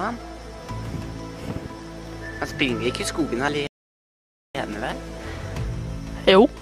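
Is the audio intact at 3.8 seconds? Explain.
No. At 3.8 seconds the playback is in a rebuffering stall that runs from about 3.67 to 4.55 seconds. The player exhausted its downloaded audio and halted until more data arrived, so the sound drops to silence for roughly 0.88 seconds. When playback restarts, it picks up exactly where it stopped. No audio is lost, but the gap adds that time to the clip's running length.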